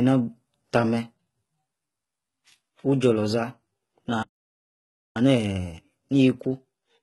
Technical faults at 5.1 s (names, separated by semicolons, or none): HE-AAC compression; playback stall; time-compressed catch-up